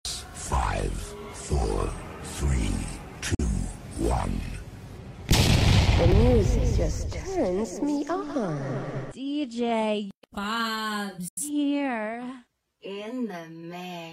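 At 3.35 s the sound drops out briefly, and again at 11.28 s for a bit longer. Both are digital broadcast dropouts. The receiver muted with a quick 3 ms fade and lost about 43 ms, then 85 ms, which fits one and then two lost frames.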